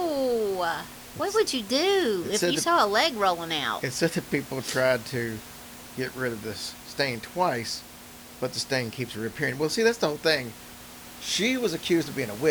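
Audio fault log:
No faults found in this recording.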